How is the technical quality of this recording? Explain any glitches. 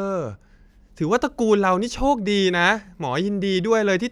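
No audible glitches or faults.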